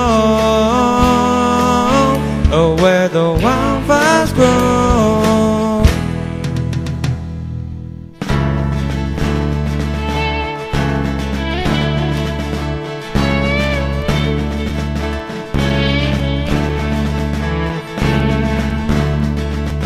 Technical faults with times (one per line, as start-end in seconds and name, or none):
14.19-19.70 periodic USB or driver dropouts